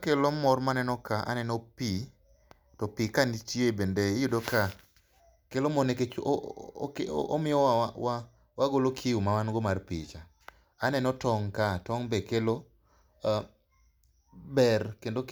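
No technical faults can be heard anywhere in the speech.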